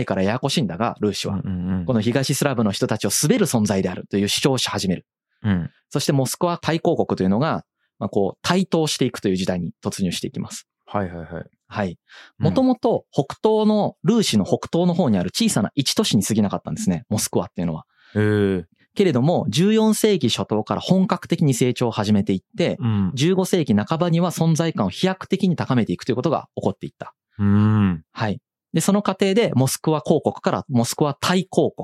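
Nothing technically wrong turns up anywhere in this speech recording, so there are no problem spots to point to and no causes to track down.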